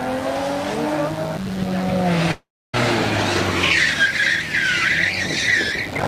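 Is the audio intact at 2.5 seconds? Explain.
No. From 2.31 to 2.75 s there is a long network dropout, most likely caused by packets that never arrived. For about 0.42 s the original audio is gone, and the receiver fills the gap by carrying the last sound forward as a fading buzzy hiss. That hiss dies away, leaving roughly the last 0.28 s nearly silent before the audio resumes further along. On a waveform this appears as a tapering smear that flattens to a near-empty stretch. A spectrogram shows a blurred, decaying band, then a dark gap with an abrupt restart at 2.75 s.

A mains buzz also runs through this moment, as it does through the whole clip. Sharp switching spikes at twice the 50 Hz mains rate add a ladder of 50 Hz harmonics reaching into the kilohertz range, heard as a steady raspy buzz roughly 20 dB below the wanted sound. On a spectrogram it forms evenly spaced horizontal lines every 50 Hz.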